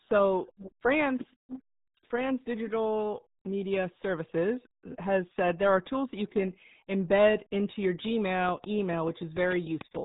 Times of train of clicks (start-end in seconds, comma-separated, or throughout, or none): 8.49-9.97